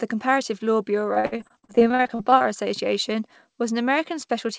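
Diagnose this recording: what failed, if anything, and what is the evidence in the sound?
Network stage: repeated packet loss from 1.14 to 2.46 s left about twenty holes, up to 59 ms each, filled by extending earlier sound, so speech turns choppy and robotic.

Buffer stage: a jitter buffer slow-down from 1.83 to 3.14 s repeated pitch periods, adding 88 ms and running at 94% speed, so sounds drag at unchanged pitch.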